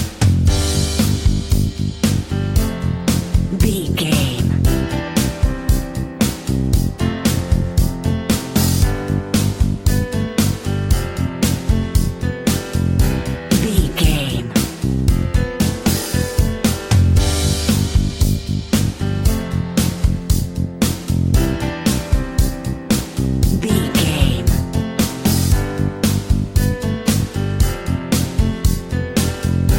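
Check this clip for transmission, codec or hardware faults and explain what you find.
Nothing in the clip points to a transmission, codec or hardware fault, so there is nothing to report.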